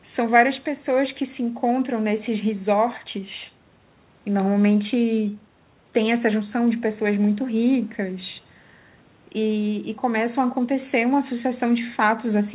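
Nothing's wrong with this speech clip: it's just an ordinary call line doing its normal job, with the usual narrowband telephone sound that stops at about 4 kHz.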